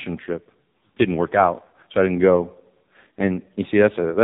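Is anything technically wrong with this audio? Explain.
Yes, there are two faults.

Throughout, the speech sounds buzzy, muffled and synthetic, with nothing above 4 kHz. This is the AMR narrowband mobile codec at a heavily degraded setting, which fits one of its lowest modes, around 5.9 kbps. The codec rebuilds the speech from a vocal tract model driven by a few pulses per 5 ms subframe, and at this rate the rebuilt sound is coarse.

From 1.56 to 1.75 s, just before "so I didn't go", the speech briefly warbles and dips. These are lost AMR speech frames: frames that failed their checksum were replaced by a decoder that repeated the last good pitch and vocal tract settings at falling gain. About 60 ms went missing, spread over 160 ms, with the longest gap 40 ms. That is too short to fade to silence, so the sound smears and weakens before recovering roughly.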